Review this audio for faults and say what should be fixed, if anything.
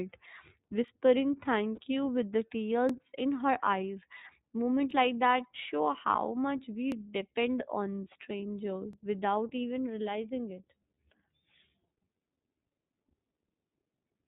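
The iLBC codec is audible throughout at 13.33 kbps with 30 ms frames: rough, synthetic speech, and a spectrogram shows nothing above 4 kHz.

Overlapping chunks repeat 13 ms every 2 s at 0.88, 2.89, 4.91, 6.92, 8.93, 10.95 and 12.96 s, causing clicks visible as waveform discontinuities.

A lost iLBC frame at 1.75–1.79 s, just before "you with the", is concealed as a 30 ms buzzy held vowel, showing smeared repeated pitch striations.

Use a wideband codec, align chunk boundaries without overlap, and protect packets against loss with redundancy or retransmission.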